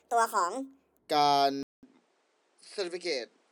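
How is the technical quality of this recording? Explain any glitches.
The recording has two clear glitches: a sped-up opening and a later drop in quality.

From 0.00 to 0.99 s, a section at the wrong speed makes the speech sound high and hurried, running 1.52 times too fast and about seven semitones sharp, likely from playback against the wrong clock.

At 1.63 s, after a 200 ms silence, the speech turns duller and about 5 dB quieter until the end, and a new noise floor sits about 40 dB down. This is likely the input switched to a poorer device.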